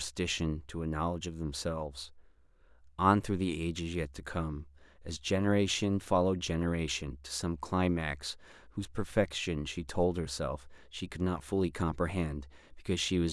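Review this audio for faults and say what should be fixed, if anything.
No faults found in the speech recording, so nothing needs fixing.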